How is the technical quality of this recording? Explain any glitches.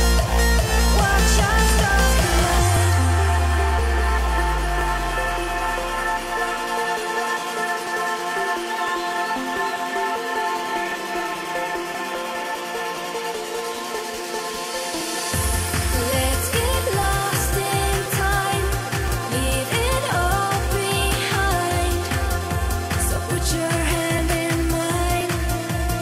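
The recording has one recurring glitch: periodic USB or driver dropouts. They start at 2.77 s and continue to 25.21 s. They repeat every 1.02 s, about twenty times in all. Each time, something blocks the audio path briefly. Roughly 4 ms of audio is skipped, not replaced with silence. The join makes a tick or pop. The ticks keep a steady rhythm and are heard only where there is signal.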